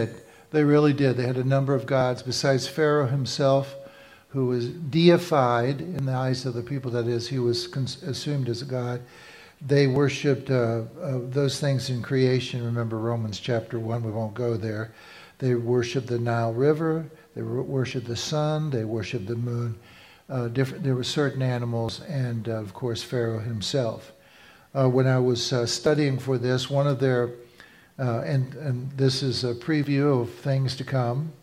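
Short skips, each roughly 30 ms, jump the audio forward at 2.01, 5.99, 9.96, 17.91, 21.89, 25.86 and 29.84 s, spaced about 4 s apart. This is likely audio missing between chunks, with 4 s blocks spliced together without silence, which shows as abrupt waveform discontinuities and thin vertical seams on a spectrogram.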